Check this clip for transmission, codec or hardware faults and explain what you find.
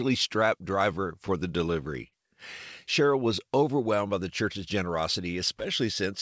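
Three packet-delivery faults show up in this speech clip, all in the receive side of a call path whose G.722 coding, consistent with 64 kbps, leaves nothing above 8 kHz.

From 1.08 to 1.74 s come scattered short gaps: a handful of packets, around four, went missing or arrived late, and the receiver patched each by extending the preceding sound. Each patch is brief, the longest around 10 ms, so the speech carries small ticks and smears rather than dropouts.

From 2.08 to 2.14 s there is a short stall from a late packet. The jitter buffer emptied before the packet arrived, so the receiver stretched the last sound for 44 ms, then resumed without loss. That segment sounds held, and the playout delay grows by 44 ms.

From 3.45 to 3.96 s the jitter buffer slow-down sets in. The buffer was rebuilding its reserve by repeating single pitch periods or bits of pauses, adding 37 ms. The speech plays at 95% speed with its pitch unchanged, sounding slightly drawn out.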